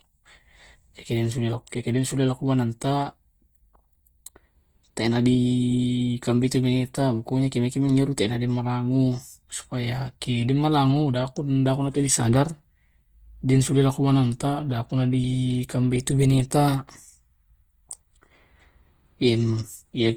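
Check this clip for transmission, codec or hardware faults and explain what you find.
There's one fault, running the whole way through: what sounds like Opus compression. The sound keeps its full bandwidth, up to about 20.1 kHz, but the speech comes across rough and grainy. That's likely the encoder's music mode filling starved bands with folded or noise-like content, which fits a low bitrate around 24 kbps, and the damage is plainly audible.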